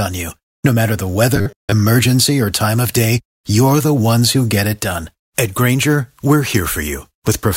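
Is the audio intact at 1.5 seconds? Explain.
No. From 1.36 to 1.73 s, just after "matter the", new audio likely arrived too seldom, so a short buffer, consistent with about 10 ms, kept repeating through most of the span. This robotic sound from repeated short buffers forces a rigid, metallic 100 Hz buzz onto the speech.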